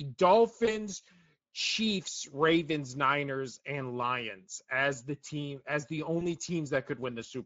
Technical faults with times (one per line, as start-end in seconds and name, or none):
0.00-7.45 Speex codec
0.65-0.84 VoIP packet loss concealed by the speech codec
6.19-6.26 VoIP packet loss concealed by the speech codec